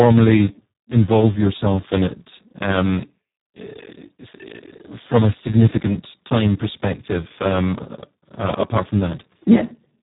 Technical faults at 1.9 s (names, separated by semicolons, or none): Speex codec